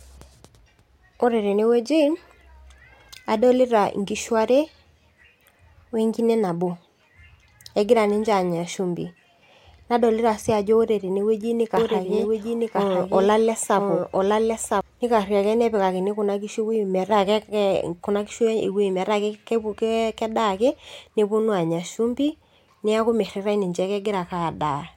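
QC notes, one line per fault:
11.77 to 14.81 s, doubled audio track: the speech suddenly gets a second copy trailing about a second behind at roughly the same level, dry and full-band, and it cuts in and out abruptly. Likely a second capture path or a misaligned edit.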